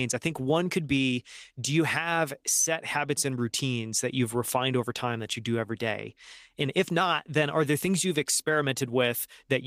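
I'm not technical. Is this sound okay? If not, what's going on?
Yes, this sound is okay, and nothing is going wrong in it.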